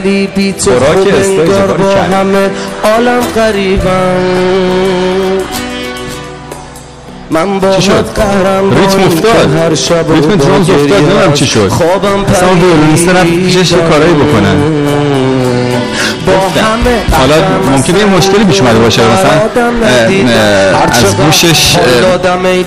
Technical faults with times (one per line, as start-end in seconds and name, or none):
0.00-22.66 hard clipping